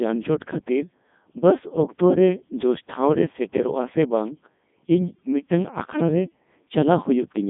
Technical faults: Codec 2 vocoder

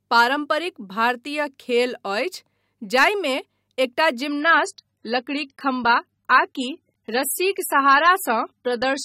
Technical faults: adaptive stream at a lower bitrate

